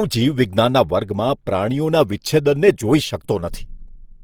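Throughout the speech, a low-rate lossy encoder has run short of bits, and the damage is plainly audible; the likely cause is Opus compression in its music-oriented CELT mode, at a rate that points to around 24 kbps. Each band's energy is kept, but starved bands are refilled with folded or noise-like content, so the voice turns rough, grainy and hissy rather than swirly. The bandwidth stays full, with content reaching about 20.3 kHz.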